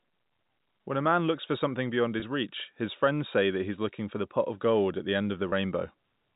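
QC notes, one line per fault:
2.20–2.22 s and 5.50–5.52 s, packet loss with pitch repetition: a single 20 ms packet drops right after "looks for something beyond" and again after "gold at the end." The receiver repeats the last pitch period to fill each gap, so you hear a brief held, slightly buzzy smear rather than a dropout, all within the 4 kHz ceiling of the G.711 telephone band.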